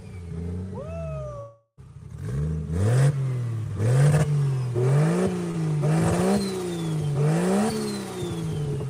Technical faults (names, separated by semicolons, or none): long network dropout; short concealed packet loss